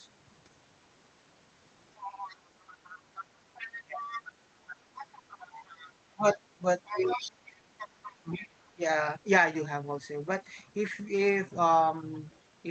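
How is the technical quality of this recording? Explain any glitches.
The recording has clear echo problems. A second voice bleeds in for most of the first nine seconds, and the main talker's speech is repeatedly pushed down while that voice overlaps it. The audio also carries the coding texture of a call, with the top end stopping around 8 kHz, which fits a wideband Opus setting.

Other side's voice leaking through, 1.96 s to 8.68 s and again briefly at 12.31 s: a second talker is audible under the main voice, roughly 15 dB quieter in the long stretch and only a faint trace, around 40 dB down, in the short one. This is likely residual echo: the far party's loudspeaker sound reached the microphone and the echo canceller did not fully remove it. It differs from crosstalk on a line because it is the far party's own voice returning through the room.

Speech suppressed in double talk, at 2.07 to 2.23 s, 3.80 to 4.12 s, 5.47 to 5.60 s, 6.16 to 7.30 s and 8.20 to 8.82 s: the main voice sags by roughly 15 to 20 dB in short bursts, nearly all falling inside the stretch where the second voice is present. 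The likely cause is the echo canceller. With both sides talking, it could not separate the echo from the local talker and attenuated everything. Packet-loss dropouts would strike at random, but these dips track the overlapping speech.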